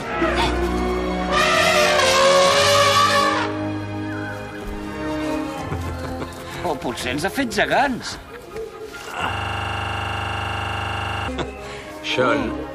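From 9.33 s to 11.28 s the audio freezes into a system hang loop. One 40 ms slice repeats about fifty times as a 25 Hz buzz, because the hardware kept replaying one ring buffer after the system stalled. The waveform shows identical repeating cycles, and the spectrogram shows vertical striations.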